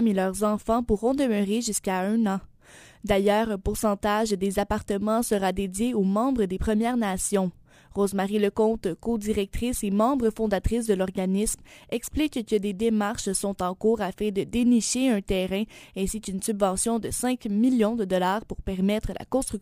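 From start to finish there's crude rate conversion going on. The grit suggests the audio was stretched up from something like 32 kHz to 48 kHz by just repeating the nearest sample instead of filtering properly. That leaves a jagged, periodic error tied to the 2:3 ratio, sitting roughly 20 dB under the sound itself, so you hear an inharmonic fizz or buzz riding along with the louder, brighter moments.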